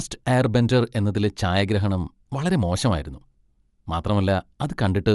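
Throughout, the speech has a plainly grainy, breathy edge and nothing above 11.6 kHz, likely Bluetooth LC3 compression replacing coarsely coded upper bands with noise.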